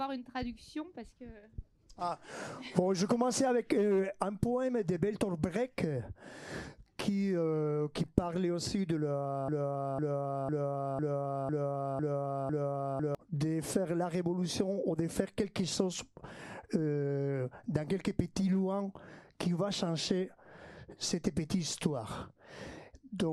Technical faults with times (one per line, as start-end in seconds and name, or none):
9.48-13.15 broken-record loop